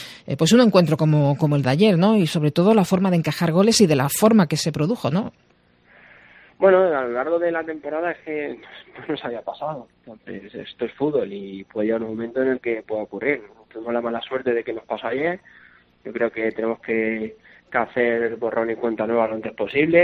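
No technical faults can be heard anywhere in the recording. Nothing in the sound calls for a timestamp or a closer listen.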